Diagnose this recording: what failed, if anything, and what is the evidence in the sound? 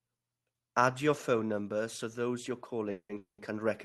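Automatic gain falling, 0.64 to 1.94 s: call processing judged the speech too loud and eased its gain down by about 6 dB, so voice and background sink together.

Automatic gain rising, 2.14 s to the end: the same gain stage then found the level too low and gradually lifted it, swelling speech and background together.

Call audio freeze, 2.91 to 3.11 s and 3.17 to 3.40 s: each is a fading buzz, then brief silence, then speech resuming intact. A network stall likely emptied the jitter buffer.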